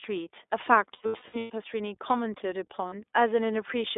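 From the start, the speech carries the sound of the iLBC codec. Everything sits in a narrow band between about 300 Hz and 3.6 kHz, and the voice has a slightly rough, synthetic grain on top of that dullness. The damage is plainly audible and fits the 15.2 kbps mode with 20 ms frames. The grain is what separates it from simple telephone band-limiting, which would sound muffled but still smooth.

Between 0.94 and 1.52 s come lost iLBC frames. About 380 ms of audio is missing, scattered across a 560 ms stretch, and the longest single gap is around a tenth of a second. The decoder fills each hole by repeating the last pitch cycle mixed with noise, so the gaps come out as a held, buzzy-breathy vowel. A second, brief loss of 40 ms at 2.88 to 2.94 s fits two dropped 20 ms frames. Unlike concealment in codecs that depend on earlier frames, the voice snaps back almost immediately after each gap.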